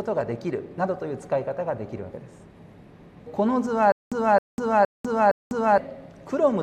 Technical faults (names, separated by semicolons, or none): stutter with silent gaps